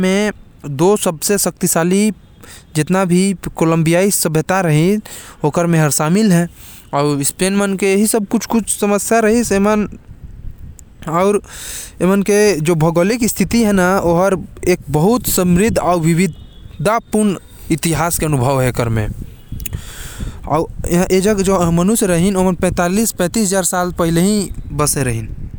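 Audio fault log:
Nothing stood out on listening to the speech in this recording.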